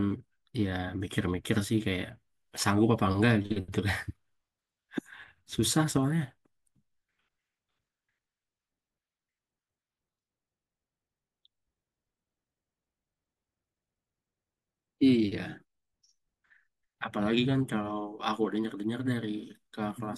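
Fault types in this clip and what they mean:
Nothing in this recording stands out as a technical fault, so there's nothing here to list.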